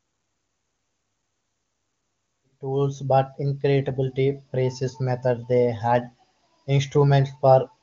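Nothing's wrong in this one: the speech comes in on a gentle fade from about two and a half seconds, fully up by 3.05 s, and there's no fault to point to anywhere in it.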